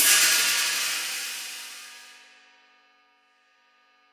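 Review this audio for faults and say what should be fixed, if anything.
No faults heard; nothing needs fixing.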